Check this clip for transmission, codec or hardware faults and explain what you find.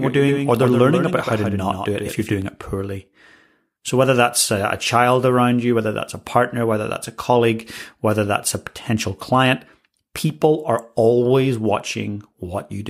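One fault is present. From the start to 2.42 s, a doubled audio track: a slower capture path likely re-feeds the speech about 150 ms late and roughly 5 dB down, giving a dry echo that stops abruptly.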